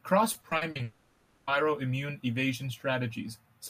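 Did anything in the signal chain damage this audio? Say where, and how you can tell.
Yes, both problems sit in the network stage. From about 0.33 to 0.81 s there's repeated packet loss, giving that choppy, robotic texture. Short holes keep appearing, the longest around 40 ms, and each one gets patched by stretching the previous bit of sound. Roughly a third of that half-second is fill rather than real signal, so chunks of the original just aren't there.

Right after, from about 0.83 to 1.49 s, there's what's likely a long network dropout. The last sound gets drawn out into a buzzy, hissy continuation that fades away instead of going fully silent, and the whole 640 ms span is filler. When the audio picks back up at 1.49 s, it carries on from further along, and nothing from that gap ever gets played.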